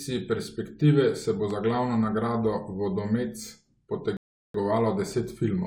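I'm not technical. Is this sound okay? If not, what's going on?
No. At 1.51 to 1.77 s there is a loud pop, two sharp thumps over the speech. It's likely from a plug, switch or static spike. At 4.17 s a rebuffering stall hits: the player ran out of audio, went silent, then resumed at 4.54 s exactly where it stopped. Nothing is lost, but it adds 375 ms.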